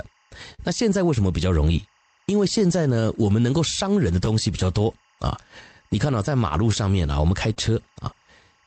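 A faint timecode bleed runs through the whole speech clip. It sits roughly 40 dB below the voice. Linear timecode at 23.976 frames per second has leaked in from a nearby track or cable. Its square wave flips between tones near 1 and 2 kHz, giving a steady chirping warble.

Clock drift between sender and receiver also runs throughout. The sender's clock runs about 2% slow. The receiver's buffer keeps draining, so small timing hiccups recur at uneven intervals as it repeats or stretches short pieces.

At 0.54 to 0.61 s there is a short stall from a late packet. The buffer ran empty, so the receiver held the last sound for 43 ms until the packet arrived. Nothing is lost. The sound just lingers with a slight buzz or dip.

Scattered short gaps come from 2.19 to 3.45 s. About four packets were lost or late, each hole 20 ms or less. The receiver continued the previous sound to patch them. Brief ticks and smears result.

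Scattered short gaps return from 5.49 to 7.58 s, about seven this time. Each is again 20 ms or shorter, patched the same way. The call path's Opus coding, cut off at 8 kHz and consistent with about 32 kbps, lies underneath.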